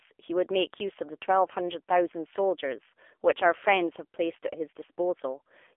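Throughout the recording the speech sounds boxed-in and plainly buzzy, with a synthetic edge and nothing audible above about 3.5 kHz, as on an old mobile call. That is the AMR narrowband mobile codec at work: the voice is squeezed into a 300 to 3400 Hz telephone band and rebuilt from a vocal-tract model fed by sparse pulses. The plainly audible damage points to a low AMR-NB mode of around 7.4 kbps.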